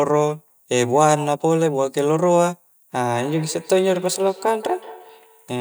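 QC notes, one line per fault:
3.1–5.6 s, feedback echo between two devices: the speech comes back at a steady interval of roughly a fifth of a second, a faint repeat peaking about 18 dB below the direct speech and running to the end of the clip. A second device in the same room is playing this microphone's signal aloud, and the microphone picks that playback up again. The local echo canceller only removes what its own device plays, so the repeat passes through.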